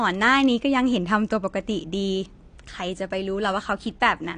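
Throughout, the speech sounds dull and smeared, with a fizzy warble and nothing above 9.8 kHz, likely AAC compression at a bitrate around 32 kbps.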